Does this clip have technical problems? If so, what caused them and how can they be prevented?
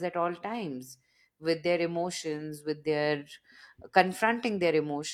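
No, no technical faults here.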